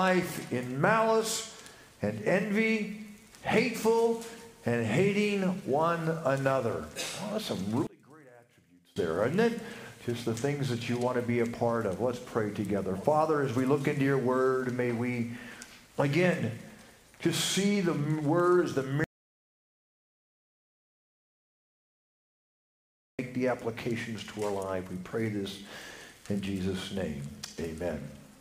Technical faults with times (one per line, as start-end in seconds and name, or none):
7.87-8.96 one channel inverted
19.04-23.19 audio dropout to silence